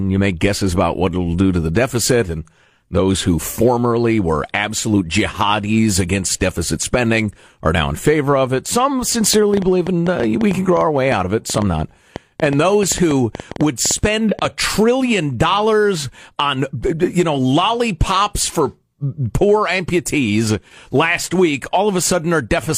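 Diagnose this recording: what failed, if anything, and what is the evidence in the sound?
The likely culprit is interference coupling into the analogue wiring or a struggling interface, injecting a train of clicks from 9.34 to 14.46 s. Around 40 same-shaped pulses arrive unevenly, nearly seven per second, ticking through the speech and pauses and peaking about 10 dB above it.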